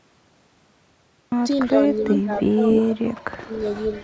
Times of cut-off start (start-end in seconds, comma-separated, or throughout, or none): 0.00-1.32